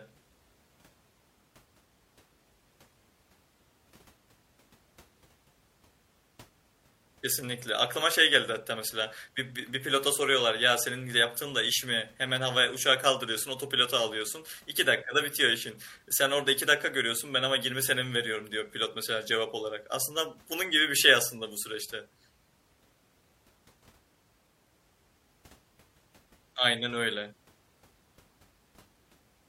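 Speech recording with no technical faults to report.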